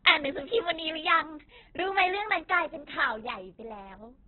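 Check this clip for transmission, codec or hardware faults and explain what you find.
One codec fault runs through the whole speech clip. Throughout, nothing sounds above 4.4 kHz, and the speech is rough and grainy. The likely cause is heavy Opus compression. Starved of bits, the encoder narrows the band and fills weak bands with noise instead of detail. That fits a very low rate near 8 kbps.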